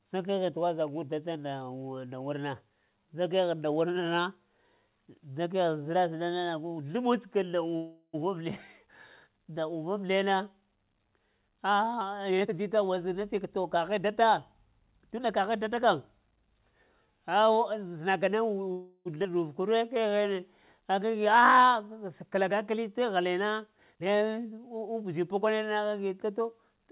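At 7.76 s the sound stops moving forward and a fading buzz fills about 0.37 s, with a brief silence, until 8.15 s. This call audio freeze likely comes from delayed packets draining the jitter buffer. Playback then resumes where it stopped, losing nothing.

From 12.29 to 15.41 s a jitter buffer speed-up runs. The receiver cuts tiny pitch-period slices repeatedly to shrink a swollen buffer. About 0.4 s disappears. The pitch is unchanged, but delivery runs at 112% and sounds hurried.

The freeze returns at 18.72 s, lasting until 19.07 s. About 0.34 s of fading buzz and a short silence fill the gap. Again nothing is lost.

At 19.23 to 19.27 s a skip ahead follows. Around a fifth of a second is dropped. The audio on either side is butted together almost seamlessly, so it jumps forward abruptly.

From 19.61 to 21.40 s a jitter buffer slow-down stretches things out. Single pitch periods are repeated to rebuild the buffer's reserve, adding 173 ms. 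Speed falls to 91% at the same pitch. Sounds drag.

A second speed-up spans 23.77 to 25.47 s. It removes about a third of a second and runs at 120%, noticeably rushed. Throughout, nothing above 4 kHz is present, which fits a narrowband call codec such as G.711.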